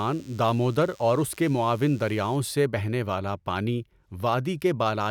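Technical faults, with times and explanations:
0.00 to 2.36 s, DECT cordless phone buzz: a steady, thin, raspy buzz sits under the speech from the very start, well below it at roughly 30 dB down, and stops at 2.36 s. Its fundamental is 100 Hz, with a dense stack of harmonics above that gives it the edge. A nearby DECT handset or base was transmitting a short radio burst every 10 ms, and the audio circuitry rectified those bursts, turning the 100 Hz pulse train into audible buzz.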